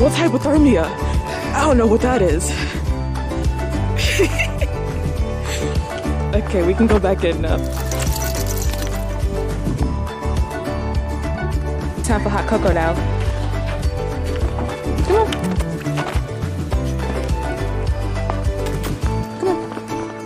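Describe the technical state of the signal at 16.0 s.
At 16.0 s, periodic USB or driver dropouts recur every 2.0 s between 10.3 and 18.3 s. Fragments well under a millisecond are skipped, leaving regular ticks, thin vertical spectrogram streaks and tiny waveform steps.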